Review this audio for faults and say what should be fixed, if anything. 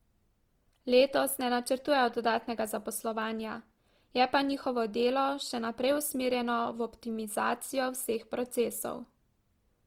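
Throughout the speech there is a rough, grainy, noisy texture, plainly audible, though content reaches about 20.3 kHz. This is likely Opus compression in its music (CELT) mode: short of bits, it holds each band's energy but fills detail with folded or noise content, fitting a rate near 24 kbps. Prevent it by encoding at a higher Opus bitrate or keeping an uncompressed master.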